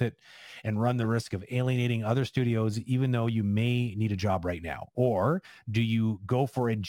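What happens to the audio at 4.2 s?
At 4.2 s the speech carries sample clock jitter, which runs through the whole clip rather than starting there. The converter's clock wanders by a few microseconds, so each sample is taken slightly off time, and the resulting error scales with how steeply the waveform is changing. Here it sits roughly 35 dB below the signal, heard as a hiss or roughness that rises on loud and high-frequency sounds and disappears in the pauses.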